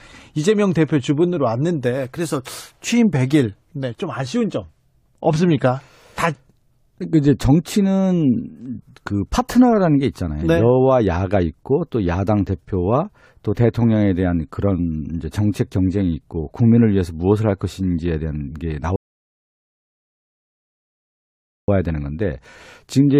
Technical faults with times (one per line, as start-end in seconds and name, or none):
18.96-21.68 rebuffering stall